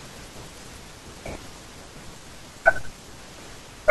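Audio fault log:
No fault is heard anywhere in the speech recording. Nothing in it calls for a log entry.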